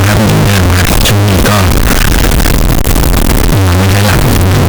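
Float read as integer runs through the whole clip: the speech sounds very loud and harsh, with the background noise as loud as the talking, yet the pitch can still be followed. The likely cause is 32-bit float samples being read as 32-bit integers, so the sign and exponent bits dominate each value and push the waveform toward a near-square shape at an almost fixed, high level, however quiet the original.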